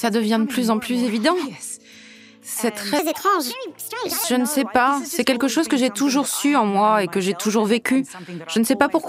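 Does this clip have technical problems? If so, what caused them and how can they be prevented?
Yes. Wrong sample rate: from 2.99 to 4.24 s, samples are played back too fast without conversion, which fits 32 kHz audio being played at 44.1 kHz. The sound runs 1.38 times faster and about 5.5 semitones higher. To prevent it, resample to the output rate, or make sure the player reads and uses the stream's declared rate.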